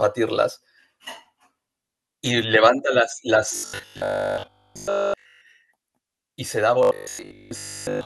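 Audio is likely arriving too seldom, so the software keeps replaying a 20 ms slice. This robotic sound from repeated short buffers runs from 3.56 to 5.42 s and 6.83 to 8.05 s, replacing nearly all the speech with a rigid, metallic 50 Hz buzz.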